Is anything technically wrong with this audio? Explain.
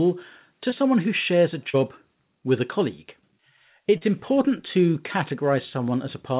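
Yes. Three short concealed packet losses occur: at 0.70 to 0.74 s, just before "who shares a"; at 1.70 to 1.76 s, just after "who shares a"; and at 3.98 to 4.03 s, just before "important to". Audio packets missed the decoder, so the receiver extended the preceding sound to fill each gap. Each is heard as a brief smear or wobble.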